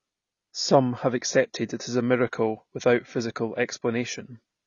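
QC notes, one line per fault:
throughout, AAC compression: speech sounds dull, with nothing above 6.9 kHz and plainly audible coding damage. This fits a low-bitrate AAC-LC encode, likely near 24 kbps, where the encoder drops the top band and coarsely quantises the rest to save bits.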